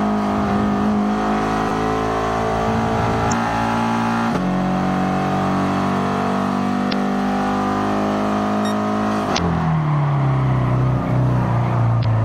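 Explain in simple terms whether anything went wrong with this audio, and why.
At about 1.69 to 1.71 s there's a repeated buffer. Fresh audio didn't arrive in time, so the player re-played the last 10 ms piece twice more, giving a tiny click or buzz.

There's also damaged data in a compressed stream at about 3.28, 6.89, 9.34 and 12.01 s. Bits of the file were corrupted, so the decoder stumbles briefly and you hear a short chirp or blip each time.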